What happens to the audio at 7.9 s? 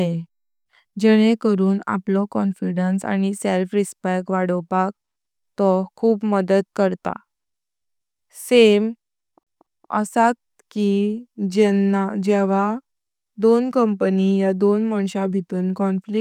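Nothing goes wrong at 7.9 s; the speech carries on intact through that moment, with no dropout, click, distortion or other audible fault.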